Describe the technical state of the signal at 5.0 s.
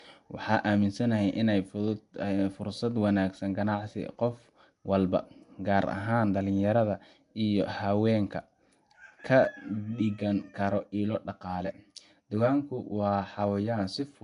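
At 5.0 s, as across the whole clip, the speech carries a rough, hissy halo and a smeared, underwater blur, with nothing above 10.6 kHz. This is likely Nellymoser compression: the coarse bit budget starves weak bands, which are filled with noise, at a rate consistent with about 44 kbps.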